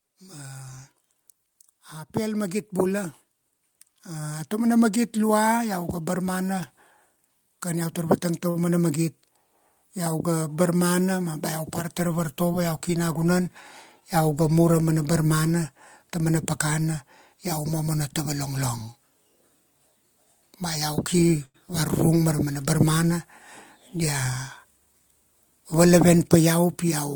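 Right from 0.29 s the automatic gain is rising, pushing the level up by about 11 dB over the next eight seconds until 8.25 s. The control decided the input was too quiet, so the voice and the room noise creep louder together.

Just after, at 8.49 to 8.57 s, there's a short stall from a late packet: the buffer ran dry, so the last bit of sound got held for 58 ms before things picked up where they left off. The same thing happens at 21.45 to 21.56 s, held for 90 ms this time, so you get a smeared, slightly buzzy hang.

Then there's jitter buffer speed-up at 12.89 to 13.41 s, running at 109% with about 50 ms trimmed, and again at 24.64 to 25.09 s at 117% with roughly 100 ms gone. The receiver is snipping out tiny pitch-period chunks to shed backlog, so the speech sounds rushed while the pitch stays put.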